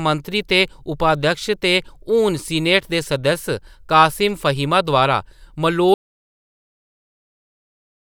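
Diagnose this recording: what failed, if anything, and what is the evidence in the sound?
The speech cuts off abruptly at 5.94 s, mid-flow, and from there to the end the recording is dead silence, with no room tone, hiss or fade. This is an audio dropout to silence. Because the file keeps running with silence rather than stopping, the input was likely lost upstream of the recorder, through a disconnected device, a failed link or a mute, while the writer kept writing blank samples. Whatever followed is unrecoverable.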